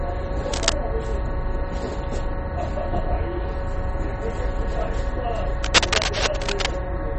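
Throughout, the audio carries plainly audible damage most likely from MP3 compression. Nothing remains above 8.4 kHz, which fits a starved bitrate of around 32 kbps. Weak frequency lines drop in and out between frames, giving a watery, swirling texture and smeared attacks.

From 0.53 to 0.75 s, and again from 5.64 to 6.68 s, dense, irregular crackling rides over the sound at roughly the same loudness as the sound itself. This is cable scratch noise, likely from a worn connector or lead shifting and rapidly varying its contact resistance.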